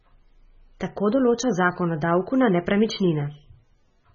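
Speech that carries heavy codec damage from start to finish, with nothing present above about 6.9 kHz, so the treble is sharply cut off and sibilants lose their edge. Weak spectral detail flickers in and out between frames, giving a watery, swirling texture behind the speech, and consonant onsets sound smeared. The likely cause is MP3 compression at a very low bitrate, in the region of 16 kbps, where the encoder drops high bands and discards quiet components to save bits.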